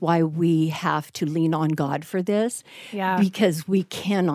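No technical faults are audible.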